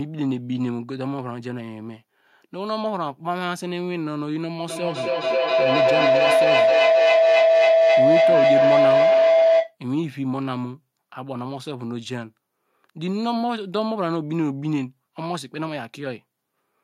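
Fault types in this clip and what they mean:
Feedback howl: the loudspeaker-to-microphone loop gains level each pass. A tone near 700 Hz rises about 9 dB over speech, repeating roughly every 300 ms.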